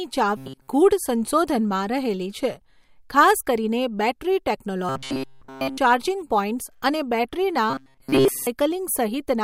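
Robotic sound from repeated short buffers at 0.37–0.68 s, 4.89–5.78 s, and 7.70–8.48 s after "અને બૅટરીના". The speech becomes a rigid metallic buzz near 133 Hz, likely from a roughly 7.5 ms chunk looping while new audio was missing.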